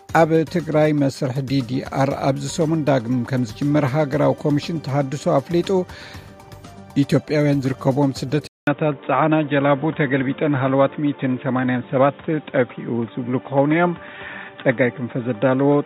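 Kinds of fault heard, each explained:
Input switched to a poorer device: from 8.47 s to the end, after a gap of about 200 ms, the sound turns dull and boxy, with a new faint background noise and little level change, likely from a narrower-band microphone or headset profile taking over.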